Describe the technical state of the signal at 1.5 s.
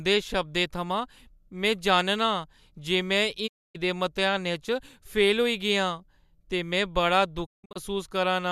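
At 1.5 s the speech signal is intact, with no audible technical fault.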